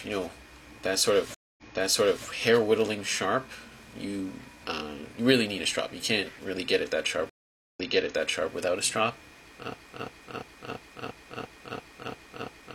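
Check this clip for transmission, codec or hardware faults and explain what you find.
Two stream reconnects and a broken-record loop are audible.

From 1.34 to 2.27 s and again from 7.30 to 8.52 s the connection dropped and the player reconnected, starting a new decoder mid-stream. Because the server resent buffered material, playback picks up earlier than where it broke off. The sound cuts to silence for about 234 ms the first time and 461 ms the second, then resumes with roughly 0.68 s and 0.77 s of already-heard audio played again.

From 9.74 s to the end, a 0.34 s fragment repeats back to back nine times, exactly the same each pass. This is likely a stall in the player, encoder or stream that kept resending the last fragment it held. The audio that should have followed is lost, replaced by the stuttering repetition.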